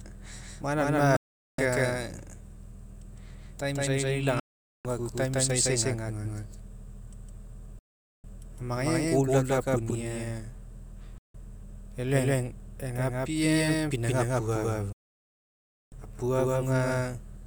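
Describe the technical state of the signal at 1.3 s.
At 1.3 s the sound is gone. A digital broadcast dropout cuts it to silence with a very fast 3 ms fade from 1.16 s to 1.59 s, about 0.42 s lost. The receiver muted after a run of corrupted or missing frames, and what was transmitted in that gap never returns.

Around that gap, every sound is followed about 150 ms later by an equally loud, dry, full-band repeat. This doubled audio track is likely caused by the same signal being captured a second time through a slower path and mixed back in.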